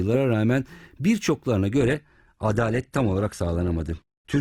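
At 1.80 s the adaptive stream switches to a lower bitrate, which fits a drop from roughly 64 to 16 kbit/s Opus. Quality falls abruptly with no gap: the speech loses everything above 12.1 kHz and takes on a thinner, more artefact-laden character until the end.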